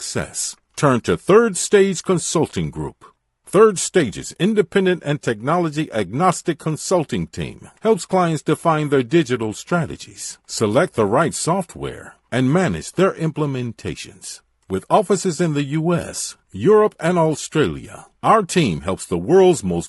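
Throughout the speech, the signal was likely passed through low-delay AAC compression, AAC-ELD, whose short frames resolve pitch harmonics poorly at a rate that fits about 32 kbps. The damage is plainly audible: the voice comes out rough and grainy, with noise between its harmonics.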